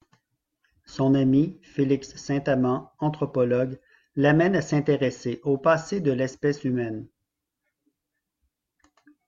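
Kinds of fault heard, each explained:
Listening to the speech closely turned up nothing that stood out.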